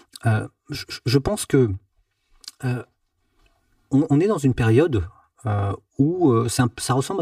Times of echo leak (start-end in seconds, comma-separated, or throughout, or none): none